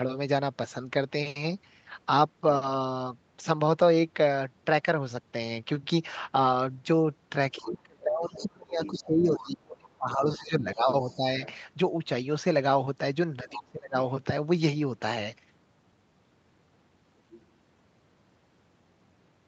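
From 7.53 to 11.41 s the speech keeps sinking, adding up to roughly three seconds of dips, the deepest around 25 dB down. That's speech suppressed in double talk: with both ends talking at once, the echo canceller likely couldn't tell the near talker from its own loudspeaker echo and pulled the whole signal down. It happens again, more briefly, from 13.43 to 13.96 s, about half a second of the same ducking.

Inside those stretches you can hear the other side's voice leaking through: at 7.56–8.44 s and 8.85–9.4 s, roughly 15 dB under the speech, then fainter bits, about 25 dB down, at 10.12–10.38 s and 10.92–11.16 s. There's a short one at 13.52–13.59 s, around 15 dB down, and a last blip at 17.33–17.41 s, about 25 dB down. Those are likely remnants of the far end's playback that the canceller didn't fully remove. Throughout, the call's microphone processing leaves nothing above 8 kHz.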